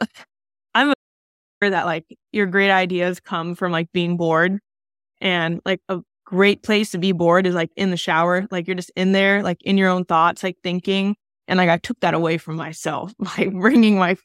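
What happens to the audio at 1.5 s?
At 1.5 s the speech is inside an audio dropout to silence, 0.94 to 1.62 s. The input was likely lost briefly. Silence replaces about 0.68 s.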